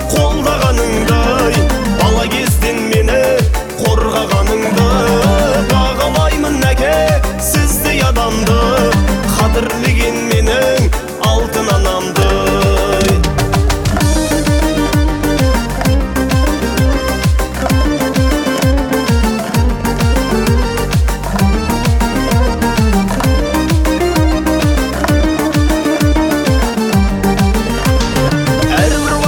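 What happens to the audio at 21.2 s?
Nothing goes wrong at 21.2 s; the audio carries straight through that moment without any dropout, click, glitch or other technical fault.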